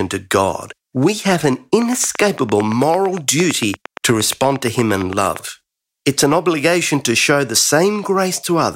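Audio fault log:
1.82–5.37 s, train of clicks: a steady ticking at about 8.7 clicks per second, some thirty alike pops standing roughly 10 dB above the speech and carrying through its pauses, likely a repeated pulse from interfering equipment or a struggling interface.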